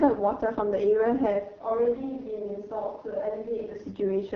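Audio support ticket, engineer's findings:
Whole clip: rough, raspy speech with an HD Voice character, nothing above 6.8 kHz. AMR wideband (HD Voice) codec, heavy damage. The rasp fits the lowest mode, around 6.6 kbit/s, where the pulse-excited vocal tract model runs too coarse to track the voice cleanly. The top band is noise-filled instead of coded, so the highs sound hissy rather than detailed. Worth checking what rate the link negotiated.

1.48 to 3.73 s: sound suddenly goes roomy and hollow, thinner in the low end, roughly 5 dB quieter, with room noise coming up to around 30 dB under the speech, then snaps back. Likely a switch to a distant microphone, with the close mic dropping out and a far mic, maybe the camera's, carrying that stretch. Both transitions are abrupt, which points to a hard source swap rather than someone moving away from the mic.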